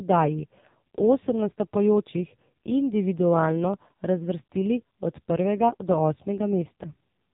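From start to finish the speech carries the sound of an AMR narrowband mobile codec, the kind used on older mobile calls. Nothing above about 3.8 kHz survives, so the voice is thin and boxed in. The damage is heavy. The sound points to a low rate near 5.9 kbps. At that rate the codec rebuilds the voice from a crude vocal-tract model and a few pulses. The result is buzzy and synthetic.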